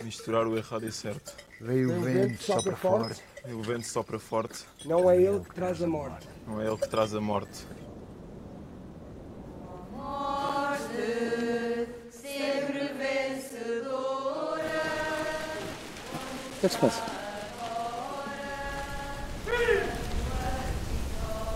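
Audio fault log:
1.47, 4.47, 7.48, 10.49, 13.50, 16.50, 19.51 s: gap between chunks, 7 ms silent holes every 3.0 s, interrupting the sound at each join.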